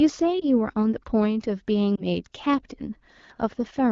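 At 0.40–0.44 s and 1.95–2.03 s, lost AMR speech frames cause brief warbles, each fitting a single 20 ms frame concealed from the previous pitch and vocal tract settings rather than a hard silent gap.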